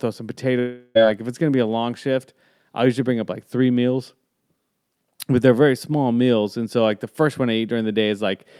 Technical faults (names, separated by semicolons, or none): long network dropout